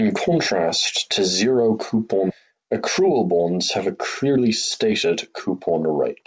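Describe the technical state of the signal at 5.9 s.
At 5.9 s a jitter buffer speed-up is underway, from 5.70 to 6.23 s. Short pitch-period slices are cut repeatedly, removing about 50 ms. Speech runs 8% faster at unchanged pitch.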